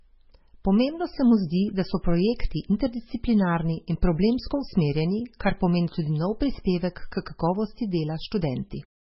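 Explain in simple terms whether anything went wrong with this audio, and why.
Throughout the speech there's a dull, watery swirl, and nothing above about 5.6 kHz, so s sounds lose their sparkle. That's heavy MP3 compression, likely from a squeezed encode that drops the treble and lets faint detail flicker in and out. The fade-out near 9 s is smooth, with no click.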